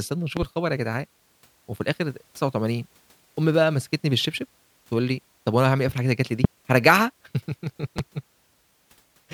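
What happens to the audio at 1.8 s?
At 1.8 s the speech carries on intact, with no dropout, click or other fault at that point.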